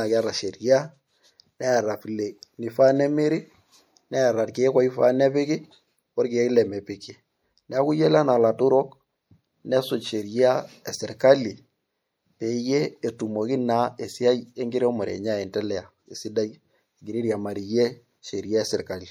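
Throughout the speech, the sound has a watery, swirly quality, with metallic chirps on s sounds and smeared consonant attacks. This is likely MP3 compression at a bitrate low enough to cut the treble and zero weak frequency lines, which fits roughly 64 kbps.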